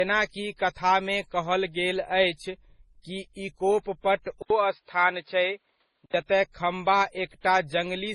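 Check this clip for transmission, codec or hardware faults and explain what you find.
Two faults are present. Throughout, transcoding between lossy codecs: nothing above 10.5 kHz, with mixed artefacts pointing to a low-rate MP3 likely re-encoded as Opus, each stage adding its own artefacts.

From 4.42 to 6.14 s, input switched to a poorer device, likely: an 80 ms gap, then dull audio with nothing above 5.1 kHz, similar level, and a faint new noise floor.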